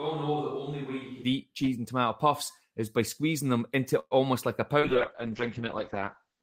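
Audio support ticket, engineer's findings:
Switch to a distant microphone, 0.0 to 1.23 s, already under way at start, close mic back before "eat cheese and tomato". Hollow, roomy, thin low end, about 10 dB quieter, room noise roughly 35 dB below speech. Likely failed close-mic feed. Sudden return separates it from gradual gain drift.

Call audio freeze, 3.99 to 4.14 s, between "by squeezing them into" and "like a". Fading buzz, then about 40 ms of silence. Likely jitter-buffer underrun from delayed packets; 116 ms inserted, nothing lost. Speech resumes where it stopped, unlike packet loss, which drops content.

Call bitrate drop, 4.82 s to end, starting after "like a". Opus encoder cut from 32 to 7 kbps after a fall in the bandwidth estimate; audio band drops from 20 kHz to 8 kHz. Rough, watery, muffled for the last 1.6 s. Coding artefacts mark it, unlike the distant mic's room sound.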